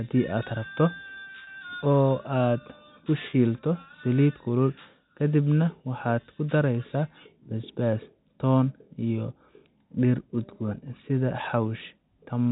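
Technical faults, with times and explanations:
1.44 to 1.47 s and 3.30 to 3.33 s, packet loss with pitch repetition: each time the sound briefly holds with a slight buzzy sameness, as about 30 ms of audio, which fits a single lost packet, is bridged by repeating the last pitch period until normal speech resumes.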